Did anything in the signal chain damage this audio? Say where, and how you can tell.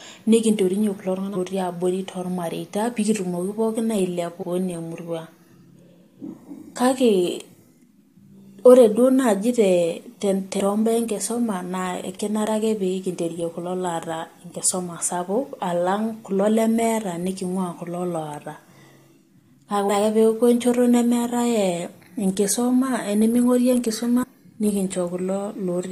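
Yes. At 24.22 to 24.24 s there is a brief glitch from damaged data in a compressed stream: corrupted bytes make the decoder misread frames and resynchronise. This is a codec or storage fault, and a spectrogram shows a sharp broadband smear with a matching waveform discontinuity.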